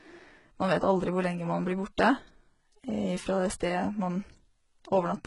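Throughout the speech, heavy codec damage is audible, likely from HE-AAC compression at a very low bitrate, which fits about 12 kbps. Only the lower spectrum is truly coded; the treble up to the 11.1 kHz ceiling is rebuilt by spectral band replication, copying lower bands upward under a coarse envelope. That sets it apart from a plain low-pass or ordinary AAC: the top end is present but synthetic, its harmonics misaligned across the crossover, so s sounds turn gritty, metallic or lispy.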